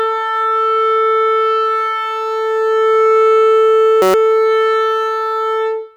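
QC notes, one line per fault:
4.02–4.14 s, system hang loop: an identical 5.33 ms slice of the music repeats 22 times as a steady 188 Hz buzz, consistent with a 256-sample ring buffer cycling during a freeze.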